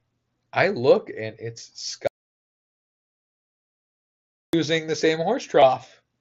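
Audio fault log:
2.07–4.53 s, audio dropout to silence. After "I look and it's" the sound cuts to dead silence with no room tone until "the same". Likely a lost input.
5.61 s, concealed Bluetooth headset packet loss. Shortly after "the same", a 15 ms gap is filled with a matched stretch of the preceding waveform.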